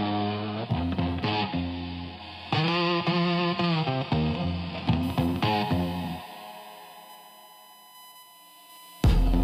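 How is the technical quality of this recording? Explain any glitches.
There's one problem: a USB whine. From 5.03 s to the end, a steady 1 kHz tone sits roughly 25 dB under the audio, likely from the USB bus's 1 ms frame current leaking through power or ground.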